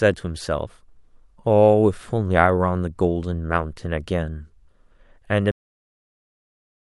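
Cut-off end at 5.51 s: the speech stops abruptly mid-sound and falls straight to digital silence for the remaining stretch, with no natural decay. The final buffers of audio were never written or played out, so the recording simply ends partway through.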